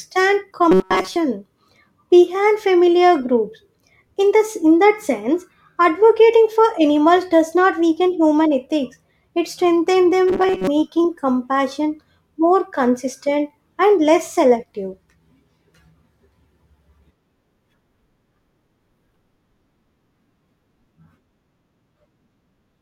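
From 0.72 to 1.16 s, and again from 10.28 to 10.67 s between "human ethics it strengthens" and "compassion more consistent and", the speech becomes robotic sound from repeated short buffers. This is likely starved playback looping about 5.3 ms chunks in place of most of the real audio, imposing a rigid 188 Hz metallic buzz. A spectrogram shows flat, evenly spaced harmonics at 188 Hz multiples, and the waveform shows identical repeating cycles.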